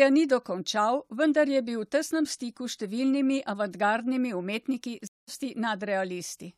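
At 5.07 s the connection breaks and the player reconnects, starting a fresh decoder partway through the stream. This stream reconnect leaves about 0.2 s of silence, until 5.29 s. The speech then picks up roughly a fifth of a second further on, skipping a short stretch.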